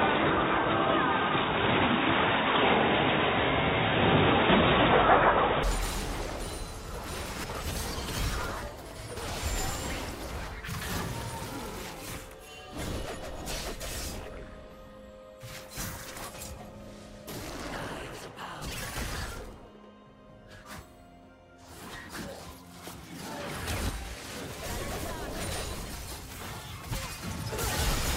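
For the first 5.63 seconds the audio is band-limited, with nothing above 3.8 kHz, a background noise floor roughly 40 dB below the signal, and a level about 5 dB different, before full bandwidth returns with no gap. The likely cause is an input switched to a poorer device.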